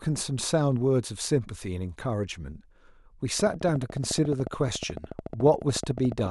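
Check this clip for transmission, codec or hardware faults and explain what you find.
One hardware fault is present in the speech. From 3.40 to 6.27 s there is a train of clicks: around forty regular pulses at 14 per second, likely from equipment interference or a faulty connection or power supply, ticking about 10 dB above the signal.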